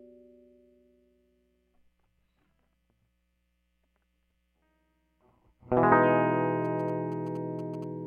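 A music clip with GSM signalling bursts from about 6.65 to 7.84 s: a galloping run of ticks and short 217 Hz buzzes, sitting well under the music. A nearby 2G phone was likely signalling, and the audio circuit rectified its radio bursts into sound.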